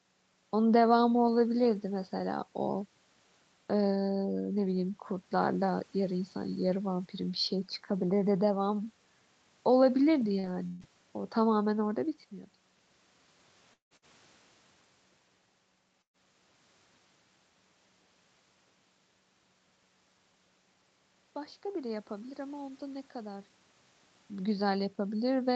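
At 10.39 s a short stall from a late packet holds the sound for about 37 ms. The spectrogram shows harmonics frozen as flat horizontal lines. The waveform shows a repeated, slightly buzzy cycle before the audio resumes from the same point.

From 10.43 to 10.49 s, and again from 10.79 to 10.85 s, a lost packet rebuilt from error correction plays as a rougher, noisier 60 ms stretch. The spectrogram shows smeared harmonics with grainy noise between them.

Between those two, a burst of packet loss from 10.67 to 10.82 s drops 120 ms. The last sound is stretched into a fading continuation, seen as decaying energy before an abrupt jump ahead.

From 13.73 to 13.94 s, a long network dropout is the likely cause of the next gap. About 170 ms of fading continuation leads into roughly 120 ms of near-silence, which the spectrogram shows as a blank column. About 180 ms of audio is gone.

A second burst of packet loss follows at 13.97 to 14.11 s, covering 60 ms with a brief, decaying hold.

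At 16.02 to 16.17 s, a third burst of packet loss loses 120 ms. A short continuation fades into about 90 ms of silence, a dark gap in the spectrogram, before the audio resumes further on.

From 21.61 to 22.05 s, a jitter buffer speed-up runs the audio at about 108% speed with unchanged pitch, removing about 40 ms in small pieces. It sounds hurried. On the waveform, individual pitch periods are missing, while on the spectrogram the harmonic spacing stays constant.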